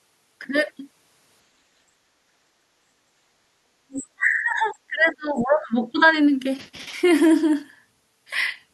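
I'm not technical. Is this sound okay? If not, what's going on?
No. The talker's device most likely plays the other person through a loudspeaker, and its echo canceller didn't fully remove that sound from the microphone. This is the other side's voice leaking through: from 3.90 to 4.04 s a short, faint scrap of a second voice sits well below the main talker.

Right after, the same echo canceller likely got confused when both people spoke at once and turned everything down, including the talker. This is speech suppressed in double talk. From 4.15 to 5.72 s the talker's voice drops sharply, almost disappearing in places. A much milder, brief dip follows from 5.92 to 6.07 s.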